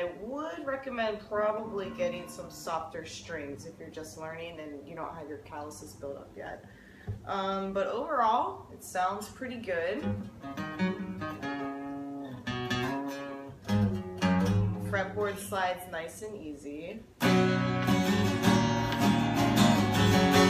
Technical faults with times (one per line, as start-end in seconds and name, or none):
none